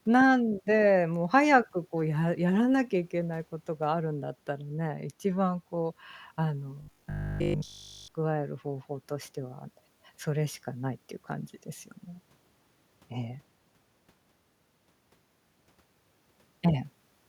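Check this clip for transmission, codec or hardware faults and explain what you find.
One fault is audible. From 6.82 to 8.08 s the speech turns robotic from repeated short buffers. It becomes a rigid, metallic buzz at 50 Hz that still loosely tracks the speech. The likely cause is audio arriving too slowly. Each 20 ms stretch appears to be replayed in place of new audio, all of it.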